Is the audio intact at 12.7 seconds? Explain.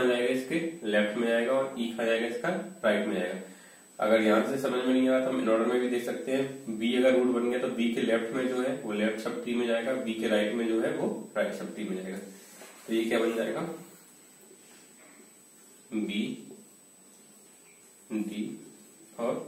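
No. At 12.7 seconds, as throughout the clip, a steady high whistle at a fixed pitch of 8 kHz sits under the sound, around 30 dB below it. This is USB whine: the bus transfers data in 125-microsecond microframes, and the current those bursts draw leaks into the audio path through shared power or ground. The repeating load produces a tone at the microframe rate of 8 kHz, which is exactly the pitch heard here.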